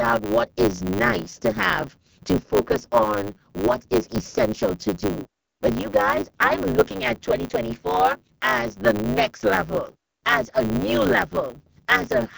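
Speech runs through two faults from start to finish. The first is the AMR wideband (HD Voice) codec at its lowest rate, 6.6 kbit/s, which fits the heavy rough, raspy texture. The codec models the vocal tract and drives it with pulses, and at this rate it keeps too little detail. The top of the band, 6.4 to 7 kHz, is filled with shaped noise. That points to AMR-WB rather than a narrowband phone codec, whose sound stops near 3.4 kHz, or a plain low-bitrate MP3, which tends to swirl and chirp instead of rasp. The second is a block size mismatch with truncation. One stage writes blocks that fit 512 samples, and the next stage reads fewer, so the tail of each block is thrown away. This leaves a steady 100 Hz buzz at the block rate, and the speech plays 1.16 times fast. Dropouts or packet loss would instead leave irregular gaps at normal speed.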